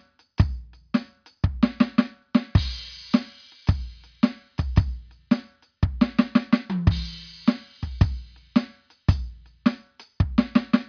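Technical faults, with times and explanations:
Nothing stood out as a technical problem on listening through this music.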